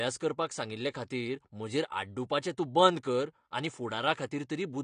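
Throughout, the speech is band-limited, with nothing above 9.8 kHz. It sounds dull and smeared, with plainly audible warbling and fizz on sibilants. The likely cause is AAC compression: AAC-LC coding short of bits, consistent with about 32 kbps, quantising bands coarsely or leaving them empty.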